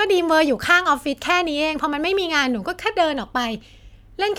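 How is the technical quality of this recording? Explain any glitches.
No glitches or faults heard.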